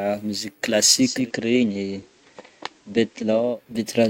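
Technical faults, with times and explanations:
1.00 to 3.62 s, digital radio blending to analogue: the receiver cross-fades over 316 ms to the FM copy, so level drops about 3 dB and hiss rises to roughly 35 dB below. Unlike plain filtering, the hiss arrives with it, and everything reverses afterwards.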